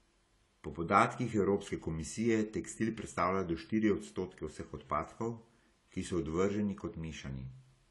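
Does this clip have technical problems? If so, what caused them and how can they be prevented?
Yes, AAC compression damage runs through the whole clip: nothing above 11.5 kHz, and sibilants sound dull and fizzy. That points to a low-bitrate encode, likely around 32 kbps, where the encoder drops high bands and quantises coarsely. Exporting at 96 kbps or more prevents it.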